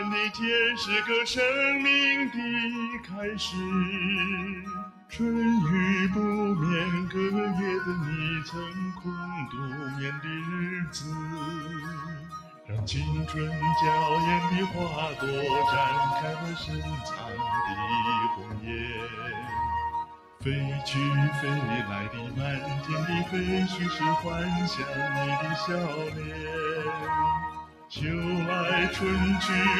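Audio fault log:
throughout: noise suppressor applied to music or sounds. A speech-tuned suppressor treats steady tones, ambience and decays as noise. Its gain swings by around 10 dB. Attacks pass while sustained parts sink, so the sound pumps and thins.
2.73–3.2 s, 4.48–5.13 s, 8.7–12.7 s, 16.85–17.39 s, 18.37–19.52 s, 20.05–20.43 s, 26.1–26.44 s, 27.58–27.91 s: sound cut by the noise suppressor. Held or fading material dips by about 5 to 9 dB. Tails end early. The longest cut spans 8.7–12.7 s.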